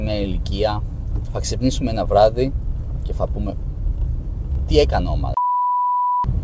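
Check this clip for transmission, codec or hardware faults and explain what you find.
One transmission fault is audible, a short concealed packet loss, on audio that has passed through a wideband call codec with nothing above 8 kHz. Between 4.54 and 4.70 s, about 20 ms of audio arrived too late to decode. The receiver synthesized a roughly 23 ms stand-in by extending the preceding sound and then cross-faded back, producing a brief smeared wobble.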